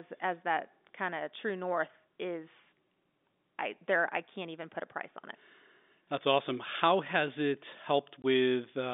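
Packet loss filled with silence occurs at 8.22 s, just after "has it". One stretch of audio never reached the receiver, and the player substituted pure silence for the missing 20 ms, a gap that fits a single lost packet. The speech drops out abruptly rather than fading, leaving hard edges on both sides of the hole. Around the gap, the narrow telephone band of the G.711 coding remains audible.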